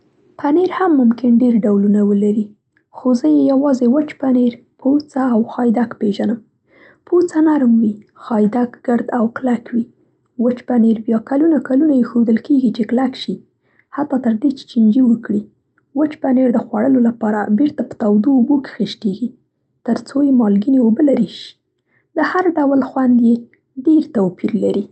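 No technical faults can be heard in this speech.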